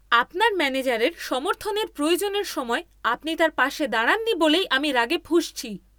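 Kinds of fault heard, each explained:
No technical faults are audible anywhere in this speech recording.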